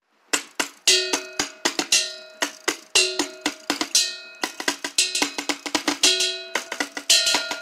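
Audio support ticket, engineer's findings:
Doubled audio track, 4.43 s to end. Likely slower duplicate capture path: full-band copy about 5 dB down, roughly 150 ms late, no decay, abrupt onset.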